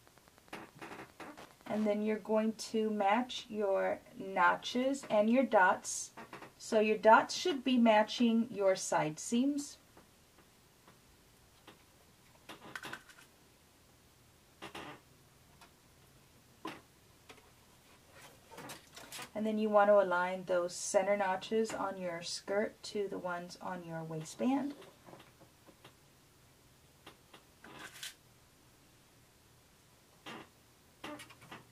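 Wi-Fi interference, 0.0 to 2.0 s: the audio circuit rectifies a nearby radio's 102.4 ms beacons, producing ticking ten times a second, roughly 25 dB down.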